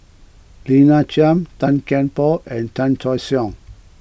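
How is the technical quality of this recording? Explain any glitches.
The technical quality of the recording is good, and there are no glitches to explain.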